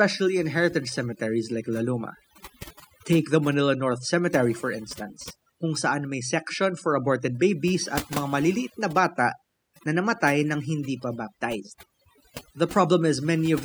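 It's a speech recording, and the whole thing has been hit with overdone noise removal. The denoiser was pushed so hard that any frequency band sitting close to its noise estimate gets pulled way down or shut off entirely. The gaps between phrases collapse into near silence with little twinkling specks, and the quieter parts of the voice get carved away too, from start to finish.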